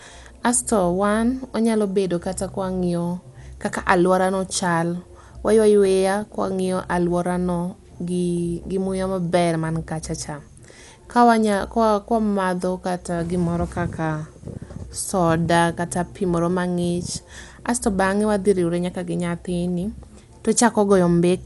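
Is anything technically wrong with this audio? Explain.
Yes. Throughout the speech there is plainly audible codec damage, most likely from Dolby Digital compression at a low bitrate, with the sound consistent with roughly 64 kbps. To save bits, the encoder cuts the band, leaving nothing above 11.5 kHz, and codes many frequency lines with no detail, so the decoder fills them with noise. The result is dull and muffled, with a rough, fluttering grain around voiced tones. A spectrogram would show a hard ceiling at 11.5 kHz and speckled, blotchy energy between harmonics.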